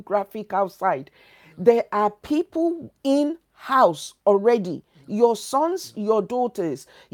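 Speech recording, no technical faults detected.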